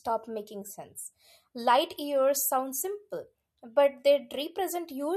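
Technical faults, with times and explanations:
No technical faults can be heard in this clip.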